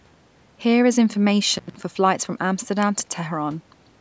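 Intermittent contact at 1.54 to 1.80 s: a loose cable or plug briefly opens, cutting the speech for about 176 ms, with crackle at each edge and faint hiss between.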